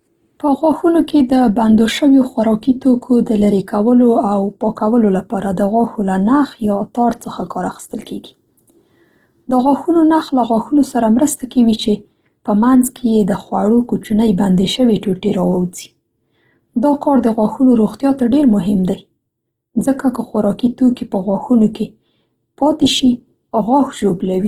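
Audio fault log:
Throughout, Opus compression: the speech sounds rough and grainy, with a noisy, sandpapery texture in place of clean tone, yet the top end stays open rather than muffled and there is little swirling. This is likely a low-rate Opus encoder in its music-oriented CELT mode, which keeps each band's energy but, short of bits, rebuilds detail by folding lower bands upward or filling with noise. The damage level fits a rate around 16 kbps.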